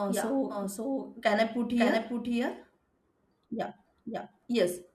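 From start to finish the speech carries a doubled audio track: a second, full-band copy trails the original by about half a second, roughly 5 dB quieter, with no decay or room colouring. The likely cause is the same signal arriving again through a slower capture path. It sounds like a flat, dry echo talking over itself. On a spectrogram every syllable's pattern reappears, slightly fainter, shifted right by that fixed gap; the waveform shows each burst shadowed by a smaller twin.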